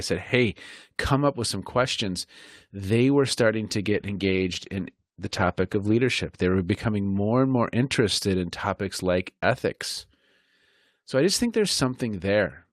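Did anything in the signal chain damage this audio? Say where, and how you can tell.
Yes. From 3.9 s to 6.05 s the speech turns rough and watery, with a coarser, smeared texture that stays at its worst for about 2.1 s before clearing. This is a call bitrate drop at the codec stage. The call's bandwidth estimate fell, so the encoder was told to spend far fewer bits and coded the signal more coarsely. The degradation fits a fall from roughly 40 kbps to about 13 kbps, followed by recovery.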